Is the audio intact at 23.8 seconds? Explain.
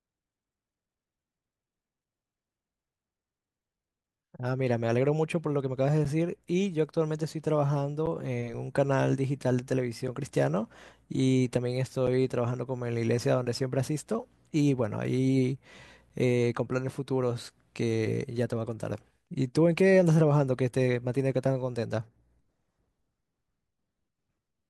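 Yes, the audio is intact at 23.8 seconds, with no dropout, click, distortion or other fault audible at that moment.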